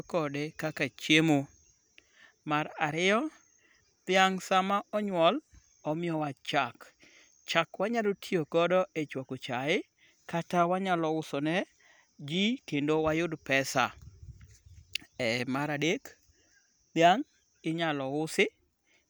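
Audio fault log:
No audible technical faults in this speech recording.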